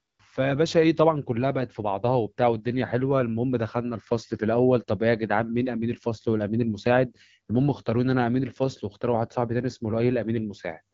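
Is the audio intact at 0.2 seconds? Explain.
Yes, though only just. From 0 to 0.19 s the phone sent no speech frames, so the receiver played AMR comfort noise, synthesised from a rough level and spectrum estimate. That smooth, steady hiss replaces the real background and ends right before 0.2 s.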